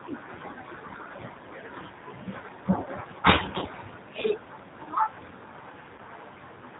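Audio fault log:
throughout: G.729 codec. The speech is band-limited, with nothing above 4 kHz, and carries a plainly audible rough, slightly synthetic edge, which fits 8 kbit/s G.729A. The decoder rebuilds each 10 ms frame from a vocal tract filter, a pitch predictor and a few pulses, so the texture sounds modelled rather than merely muffled. That distinguishes it from a simple low-pass filter, which dulls the sound but leaves it natural.
3.59 to 3.65 s and 5.95 to 6.01 s: VoIP packet loss concealed by the speech codec. At each point about 30 ms of signal is missing, which fits three lost 10 ms frames. The decoder fills the gap by stretching the preceding pitch and filter into a buzzy tone or coloured noise that fades, and the speech stays weakened briefly after it resumes. Unlike a plain dropout, there is no silent hole or click. The gap is papered over with a synthetic smear.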